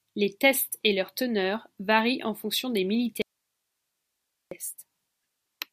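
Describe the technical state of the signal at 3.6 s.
At 3.6 s the speech is inside an audio dropout to a faint residue, running from 3.22 to 4.51 s, about 1.3 s, right after "varient en fonction des". The signal likely vanished upstream while the path behind the break stayed live, so the gap holds only hiss, around 55 dB below the speech. Unlike a natural pause or a fade, the speech cuts off and returns abruptly, and the gap has no breath or room sound.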